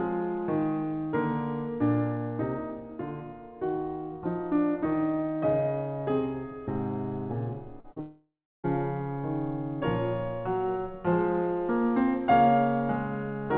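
Just before the 8-second mark the music hits two short concealed packet losses, at 7.80 to 7.87 s and again at 7.92 to 7.99 s. Each time about 40 ms of audio didn't reach the decoder in time, so the receiver patched the gap by stretching out the last bit of sound and then blending back in. You hear them as a quick smear or wobble, two in a row.

Right after that, from 8.00 to 8.67 s, there's a long network dropout. The music is most likely cut by a stretch of lost packets. For the first 0.3 s or so the receiver keeps extending the last sound as a buzz or hiss that fades away, and then there's about 0.34 s of silence. When the music returns, it picks up further along, and that whole chunk of roughly 0.64 s is simply missing. All of this sits inside the telephone-band sound of the call path, with nothing above 4 kHz, which fits a G.711 codec.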